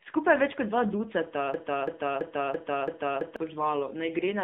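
From the start, the speech carries AMR narrowband mobile codec damage. Nothing passes above 3.7 kHz and little below 150 Hz, and the voice sounds buzzy and synthetic, which points to a low rate of around 7.4 kbps. A plain telephone band filter would only muffle the sound without adding that synthetic buzz.

Right after "več kot dva ducata", at 1.54 s, a broken-record loop begins. A 0.33 s fragment repeats exactly, back to back, until 3.36 s, likely because the stream stalled and kept resending its last piece. Unlike an echo, the repeats never fade, and the missing speech never returns.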